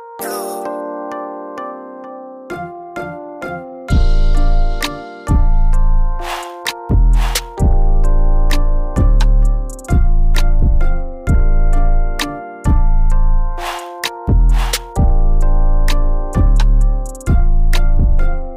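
No technical faults can be heard anywhere in it.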